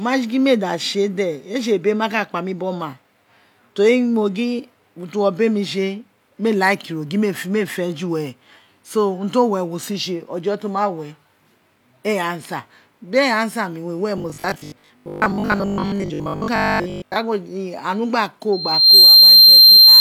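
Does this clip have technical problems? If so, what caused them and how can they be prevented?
Yes. From 14.18 s to 17.16 s, just after "mi we were", the speech turns into a rigid, metallic buzz at 50 Hz: robotic sound from repeated short buffers. The likely cause is audio arriving too slowly, so playback keeps looping the last 20 ms fragment and skips most of the real audio. A spectrogram shows a fixed comb of harmonics at multiples of 50 Hz that ignores the natural pitch. The waveform shows identical 20 ms cycles. Larger jitter buffers and steadier network or CPU scheduling prevent this.

From 18.52 s to the end at 20.00 s there is a loudspeaker feedback squeal. A single tone at 4.2 kHz swells in under half a second to roughly 15 dB above the speech. The microphone is picking up the loudspeaker it feeds, and the loop gain at 4.2 kHz exceeds one, so the tone grows on its own. A spectrogram shows one bright horizontal line at 4.2 kHz. 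The waveform envelope rises quickly to a steady, dense band. Lowering the gain, moving the microphone away from the speaker's axis, or notching 4.2 kHz prevents it.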